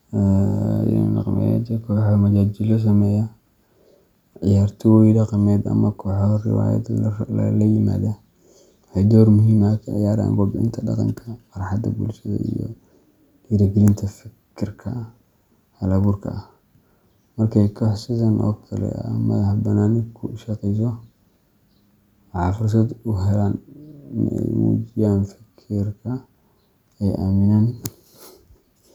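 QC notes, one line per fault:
No technical faults are audible anywhere in the speech signal, so there is nothing to log.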